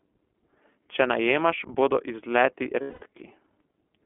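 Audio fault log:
Throughout, iLBC codec: the whole speech clip sits in a narrow telephone band, roughly 250 Hz to 3.4 kHz, with nothing above 4 kHz making it through. The codec rebuilds each 20 ms frame's excitation on its own, so the voice comes across clear but plainly rough and a bit synthetic. The quality points to iLBC's 15.2 kbps mode.
2.82 to 3.04 s, lost iLBC frames: a 200 ms gap where packets went missing, which fits about ten 20 ms frames in a row. The decoder fills it by looping the last pitch cycle with some noise mixed in and letting it fade. You hear a held, slightly breathy, buzzy vowel instead of real speech. Since each iLBC frame stands alone, the voice snaps back almost immediately once packets arrive again.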